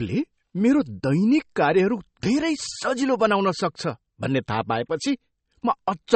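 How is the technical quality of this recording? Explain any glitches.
The recording's quality is noticeably degraded. Likely MP3 compression runs throughout: treble stops at 8.4 kHz and weak frequency lines flicker between frames, giving watery, swirly speech, which fits a low bitrate around 32 kbps.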